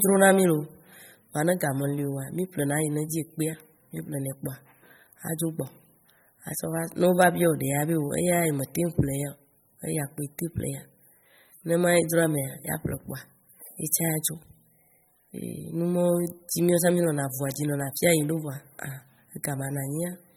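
Throughout the speech the audio carries plainly audible coding damage, with nothing present above 18 kHz, and the likely cause is MP3 compression at a low bitrate, the degree of damage fitting something around 32 kbps. Starved of bits, the encoder discards weak spectral lines that then flicker in and out between frames, giving a watery, swirling texture. Sibilants turn metallic and chirpy, and consonant onsets lose their crispness as attacks smear.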